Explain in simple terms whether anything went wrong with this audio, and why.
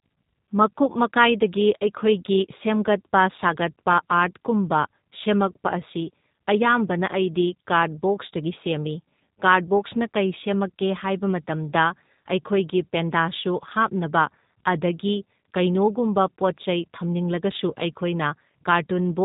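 G.729 codec, from start to finish: the speech was squeezed through a very low-rate phone codec that rebuilds the speech from a rough model of the throat and a few pulses per slice of sound. Everything above 4 kHz is lost, so it sounds muffled, rough and slightly synthetic.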